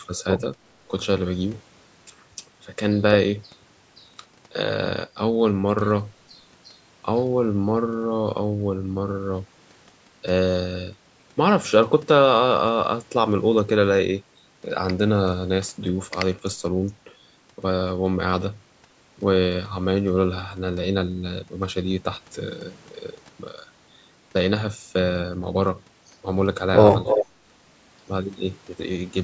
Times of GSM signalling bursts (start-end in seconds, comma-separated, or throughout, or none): none